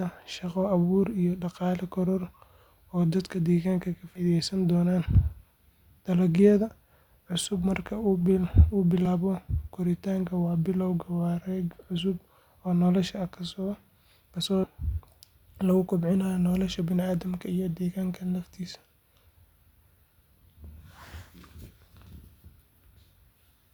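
Five brief glitches interrupt the speech, each with a small forward jump. These are compressed frames skipped. The first comes at 4.15–4.21 s, right after "oo dadka deegaanka ka", and loses about 70 ms. The others fall at 7.63–7.66 s (about 40 ms), 9.05–9.07 s (one frame), 14.63–14.66 s (about 100 ms) and 20.37 s (about 70 ms). The jumps fit 20 ms frames that were left out.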